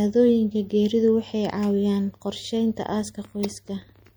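From the first moment to the last, the speech carries a watery, swirly texture, with s sounds turning metallic and chirpy and consonant attacks softening into a smear. That's likely MP3 compression, and a fairly heavy-handed pass, consistent with something around 64 kbps. The encoder runs short of bits, so it drops quieter frequency lines that then flicker in and out between frames. That flicker gives the sound its swirl.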